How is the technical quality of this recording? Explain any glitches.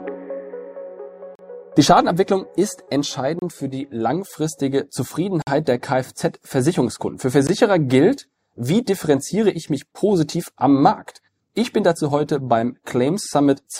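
The recording has one recurring glitch: short dropouts to silence.

Gap between stream segments at 1.35–1.39 s, 3.39–3.42 s, 5.42–5.47 s and 7.47 s: mismatched segment timestamps leave holes of about 17 to 50 ms, which the player fills with silence. Hard-edged breaks land every two seconds, matching the segment length, and no audio is lost.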